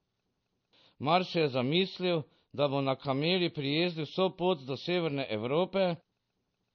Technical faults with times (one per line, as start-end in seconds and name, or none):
0.00-6.75 MP3 compression